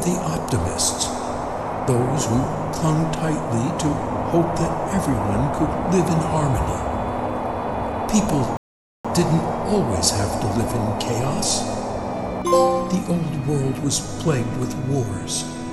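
The audio has a rebuffering stall at 8.57 s. It drops to silence until 9.05 s, then resumes exactly where it stopped. The player ran out of downloaded audio. Nothing is lost, but about 0.48 s is added.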